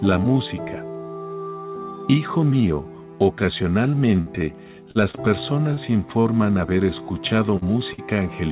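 Audio carried over a WebRTC call path with an empty band above 4 kHz on the spectrogram, which fits G.711 mu-law at 64 kbps, with a burst of packet loss, three stalls from late packets and three concealed losses. The burst of packet loss runs from 4.21 to 4.40 s. About 40 ms of audio is gone and roughly 50 ms of continued, fading sound stands in for it. On a spectrogram this shows as smeared, repeated harmonics or noise that darken before the real signal jumps back. Short stalls from a late packet come at 4.91, 5.11 and 5.74 s. The jitter buffer ran dry and the last sound was stretched by 39, 26 and 34 ms, with nothing lost. The waveform shows a brief held, slightly dipping stretch, and everything after it arrives later. Short concealed packet loss occurs at 6.21, 7.57 and 7.93 s. Each time about 40 ms never arrived and was replaced by a continuation of the preceding sound. On a spectrogram each shows as a narrow patch of blurred, copied texture with a soft seam where the real audio blends back in.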